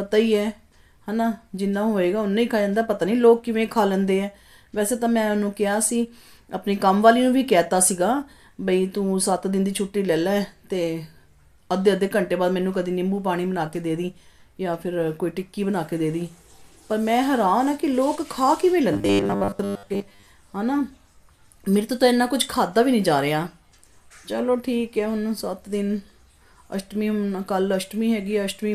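From 18.93 to 20.26 s there's robotic sound from repeated short buffers: a stiff, metallic 100 Hz buzz. It's likely fresh audio arriving too slowly, so a 10 ms chunk gets looped over most of that stretch while the real material is dropped.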